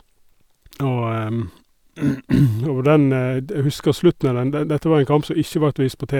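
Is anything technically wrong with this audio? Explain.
No, nothing technically wrong can be heard in this speech recording. The signal stays steady throughout, with no event that points to a problem in capture, processing or playback.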